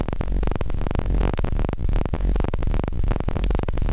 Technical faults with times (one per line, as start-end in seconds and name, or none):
none